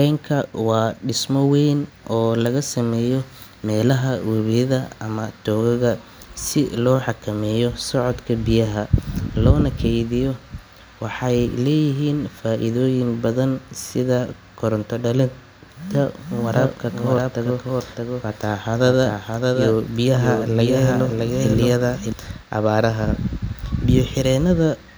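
From 16.41 to 22.13 s, after "badan sida koronto dhalinta", a doubled audio track appears: a dry copy about 5 dB quieter, roughly 0.7 s behind, likely from a second capture path. Unlike echo, it neither decays nor fades.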